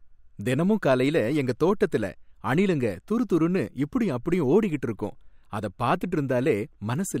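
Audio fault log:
No faults found in this speech clip.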